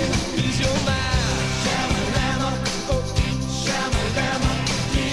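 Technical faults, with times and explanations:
Nothing stood out as a technical fault on listening.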